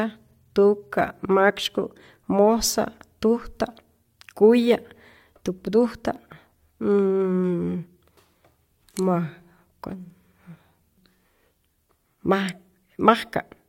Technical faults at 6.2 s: overlap between stream segments

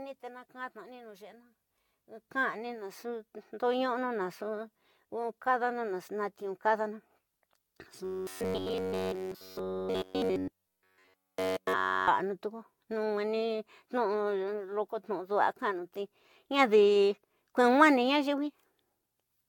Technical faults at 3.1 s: generation loss

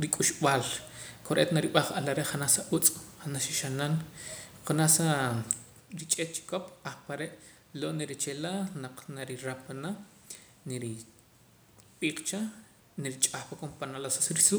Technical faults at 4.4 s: none

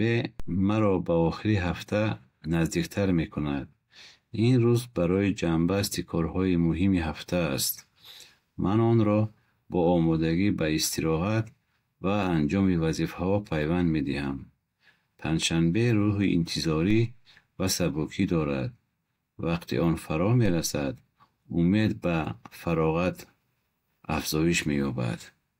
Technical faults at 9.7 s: none

